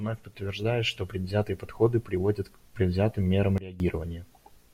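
A speech clip with one sudden gain jump. Just after "приводят к предвзятым мерам", at 3.58 s, the level drops abruptly by about 17 dB and stays down until 3.8 s. There is no fade in or out. The voice and the background noise fall together, in a single step. That points to the gain being switched from one sample to the next. The likely cause is a level setting or bit shift applied without a ramp.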